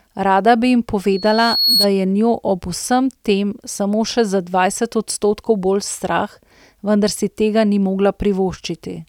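Speech, with loudspeaker feedback squeal from 1.11 to 1.89 s, between "bi jim" and "je njo ob vsem". A pure tone at 4.3 kHz swells over around half a second until it sits a few decibels above the speech. The microphone is picking up the loudspeaker it drives, and at that frequency the loop gain has risen above one, so the tone keeps feeding itself until the amplifier limits it or the loop is broken.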